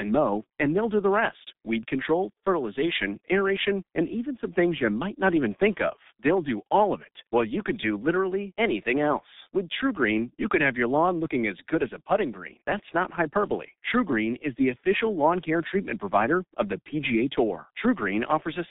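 From start to finish, the speech carries G.723.1 codec damage. Nothing above 3.8 kHz survives, and the band sits near 200 Hz to 3.7 kHz. Consonants blur. Voices sound muffled and hoarse. The heavy smearing fits a low bitrate near 6 kbit/s.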